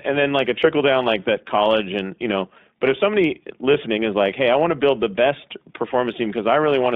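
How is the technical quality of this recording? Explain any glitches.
Quality is limited by narrowband iLBC coding throughout, with one brief dropout.

iLBC codec: Across the whole clip, audio is confined to about 200 Hz to 3.7 kHz. Independently coded frames leave speech clear but rough and synthetic, plainly audible, which suggests the 15.2 kbps mode.

Lost iLBC frames: At 3.72 s, between "know but if somebody" and "is like hey i", a 20 ms gap sounds like a single lost frame. The decoder fills it by repeating the last pitch cycle mixed with noise, giving a short buzzy, held-vowel blip. Because each frame stands alone, normal sound returns immediately.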